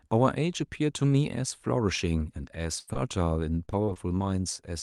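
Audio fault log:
2.71 s, 2.87 s and 2.95 s: lost packet rebuilt from error correction. Each of these three 20 ms packets went missing, but the packet following it carried a low-bitrate copy, and the decoder played that copy instead of leaving a hole. No gap can be heard. Each of the three patches comes out rougher and grainier than the audio around it, because the backup copy holds less detail than the original frame.
2.79–2.89 s: burst of packet loss. About 80 ms of consecutive packets failed to arrive in time. The receiver bridged the gap by extending the last sound it had and fading it down as the loss continued, so that stretch turns into a held buzz or a fading hiss rather than real content. Playback then picks up later, and the audio in between is gone. The rebuilt packet at 2.87 s falls inside this burst.
2.93–2.97 s: short concealed packet loss. Roughly 20 ms never reached the decoder in time. 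The receiver carried the preceding sound forward, as pitch if it was voiced and as shaped noise if it was not, and then crossfaded back into real audio. This is heard as a brief smear or wobble right after the burst. The repair at 2.95 s falls within this span.
3.65–4.22 s: repeated packet loss (robotic sound). Four separate holes appear over about 0.56 s, totalling around 100 ms, with the longest at 37 ms. About 18% of this span is concealed. Every gap gets patched by extending the previous sound, and the next gap follows shortly after, giving a choppy, robotic texture with small pieces missing. Some of the lost audio, roughly 70 ms of it, was recovered from error-correction copies, which come out rougher than the surrounding audio.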